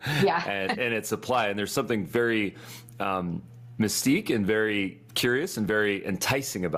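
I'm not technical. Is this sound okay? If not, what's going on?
No. The level keeps being pulled down whenever the speech gets loud, so loud and soft parts end up squashed closer together, all the way through. That is gain pumping, likely from the level being set far too high so an automatic limiter keeps pulling it down hard.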